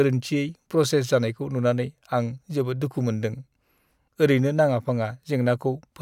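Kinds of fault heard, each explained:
No technical faults audible anywhere in the speech.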